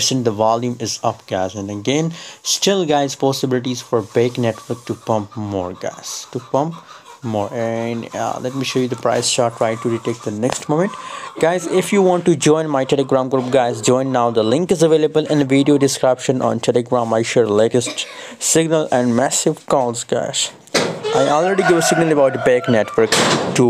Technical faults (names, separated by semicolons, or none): none